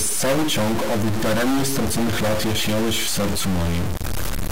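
A harsh, buzzy distortion rides on the speech from start to finish, and the pauses between phrases are not silent but filled with a gritty noise floor sitting somewhere around -20 dBFS. This is the sound of a stuck bit, likely a converter or data line holding one fairly high-order bit fixed, so roughly half of all sample values are pushed off by that bit's weight, and even near-zero signal flips into audible noise.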